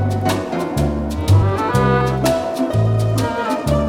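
At 2.73 s the audio jumps forward by around 70 ms, the length of about three 21.3 ms frames. These compressed frames were skipped, either missing from the file or rejected by the decoder as damaged, so the stream resumes further along. That sets it apart from a dropout, which would leave an audible gap of silence.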